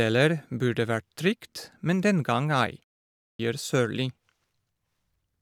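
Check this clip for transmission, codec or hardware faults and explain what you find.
One fault is present: a clipped start after a pause at 3.17 s. After a silence of about 0.41 s, the first 0.22 s of the returning speech is missing, with the sound resuming at 3.39 s. The output path appears to drop into a low-power or unlocked state during the gap and needs time to wake or resynchronise, so it swallows the onset. The result is speech that begins abruptly from silence, its initial sounds cut off.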